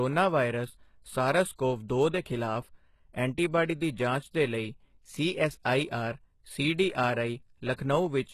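Throughout the speech, the treble appears to be rebuilt rather than transmitted, most likely by HE-AAC compression at a very low rate, which fits a bitrate around 16 kbps. The codec keeps only the lower spectrum and fakes the top by copying lower bands upward under a coarse envelope, and nothing survives above 12.3 kHz. The damage is plainly audible: the high end sounds synthetic, with sibilants turning gritty, metallic or lispy because the copied harmonics no longer line up with the real ones below.

From 7.73 to 7.78 s comes a pre-echo. A sharp onset landed late in a transform block, and the coding noise sized for that loud moment was spread across the whole block, including the quiet stretch before it. The result is a short hiss smeared about 52 ms ahead of the attack, which itself sounds softened and blurred rather than crisp.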